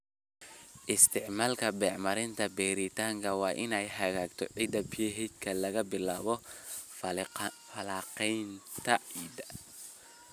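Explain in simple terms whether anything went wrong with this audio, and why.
Nothing went wrong with this speech recording: the signal comes through steady and intact, with no interruptions, distortion or other technical faults to point to.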